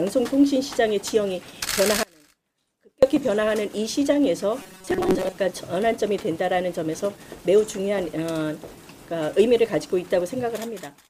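From 2.03 to 3.03 s, the signal path likely lost its input while staying live, causing an audio dropout to a faint residue. For about one second the sound cuts out abruptly, leaving only a faint trace roughly 30 dB below its normal level, before snapping back.

Between 4.62 and 5.36 s, new audio likely arrived too seldom, so playback looped a buffer of roughly 5.3 ms while most of the real material was skipped. That repetition imposes a fixed 188 Hz buzz, producing robotic sound from repeated short buffers.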